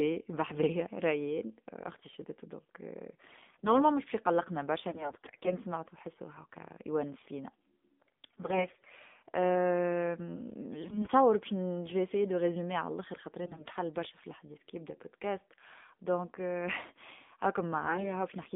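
Throughout, the speech carries the sound of the AMR narrowband mobile codec at 7.4 kbps. The line band runs only from 200 Hz to 3.6 kHz, so sibilants are dull and there is nothing in the upper range. At this low bitrate the vocal-tract model is fed too few excitation pulses per subframe, and the voice comes out plainly buzzy and synthetic. It is a steady coding colour, unlike the intermittent damage that follows.

AMR bit errors break in at 3.26–3.76 s, 4.88–5.59 s, 8.26–8.93 s, 10.84–11.10 s, 13.44–13.76 s and 17.82–18.11 s. Flipped bits in the weakly protected parts of each frame slip past the checksum. Pulses then land in the wrong positions, and the fine pitch, gain and spectral values drift. The voice becomes hoarse, scratchy and gargly but keeps its rough pitch and loudness. That separates these bursts from frame loss, which mutes the voice or smears it into a repeated held sound. 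The 13.44 s burst, with errors at about a fifth of the bits, is the roughest.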